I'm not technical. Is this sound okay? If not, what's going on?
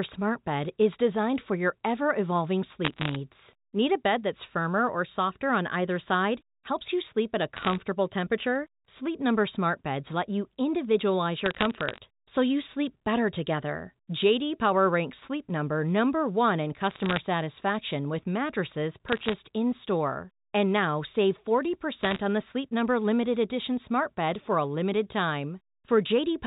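No. There are bit errors on a digital phone line: stray flipped bits in the telephone signal each corrupt a single sample, producing short bursts of sharp ticks and crackle over the speech at 2.8, 7.6, 11.5 (after "let you individualize"), 16.9, 19.1 and 22.0 seconds.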